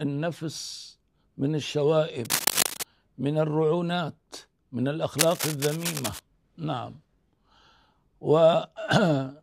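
From 2.25 to 2.83 s, a burst of dense, irregular crackle sits on top of the sound at roughly the same level as the sound itself. A second, somewhat quieter stretch runs from 5.18 to 6.19 s. Both are cable scratch noise, heard as scratching and rustling. The likely cause is a worn lead, connector or control being moved, with its contact resistance jumping about rapidly and injecting ragged noise into the signal.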